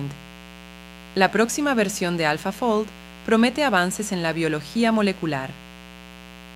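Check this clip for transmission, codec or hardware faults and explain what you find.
There is a hardware fault: mains buzz runs under the speech for the whole clip. Sharp switching spikes from a dimmer, rectifier or unshielded line get in twice per 60 Hz cycle. That gives a raspy buzz built from 60 Hz harmonics stretching up into several kHz, sitting roughly 20 dB below the speech. On a spectrogram it shows as evenly spaced horizontal lines at multiples of 60 Hz, unbroken through pauses. The waveform shows repeating spikes 8.3 ms apart.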